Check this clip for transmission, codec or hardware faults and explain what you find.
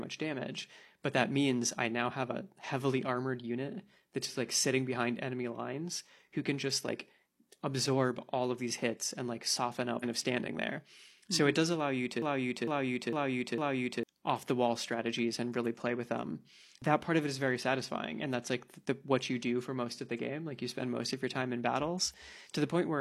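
Two faults stand out, both from the delivery path rather than the recording.

At about 9.99 to 10.04 s there's a stream segment skipped. The speech lurches forward with a tiny blip at the join, so a chunk of what was said just isn't there. That's likely a segment of the stream that never loaded, with the player carrying on from the next one and butting the two pieces together.

From 12.22 to 14.03 s you get a broken-record loop. A slice of about 0.45 s plays four times in a row, identical each pass, before normal speech resumes. The likely story is a stall somewhere in the player, encoder or stream, which kept resending the last fragment it had in hand. Whatever should have been heard during those seconds is lost.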